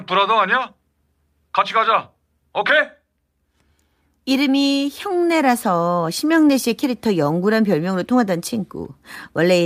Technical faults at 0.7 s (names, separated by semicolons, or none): none